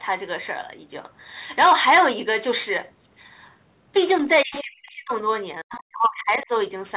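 From 4.19 to 5.13 s the speech dips hard, by as much as about 40 dB. This is speech suppressed in double talk, likely because the echo canceller couldn't separate the talker from the loudspeaker echo while both sides spoke, so it turned both down. Within that stretch, at 4.55 to 4.62 s, a faint scrap of a second voice comes through, about 15 dB below the speech. That is the other side's voice leaking through, likely residual loudspeaker echo the canceller failed to remove. The same suppression returns from 5.63 to 6.5 s with a similar deep drop. From 5.7 to 5.8 s another fragment of the other side's voice leaks in, about 20 dB under the speech.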